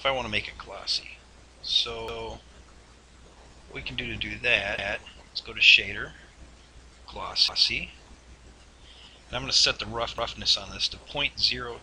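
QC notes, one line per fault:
2.08–2.28 s, 4.78–4.98 s, 7.48–7.68 s, 10.18–10.38 s: overlapping chunks. The audio was handled in 2.5 s blocks, and each new block starts 200 ms before the previous one finished, so that 200 ms stretch plays twice at every join. The doubled material is heard as a brief stutter, recurring at a steady interval of about 2.7 s.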